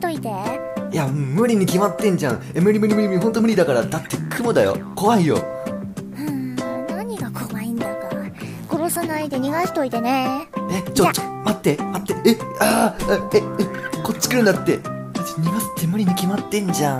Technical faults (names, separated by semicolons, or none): none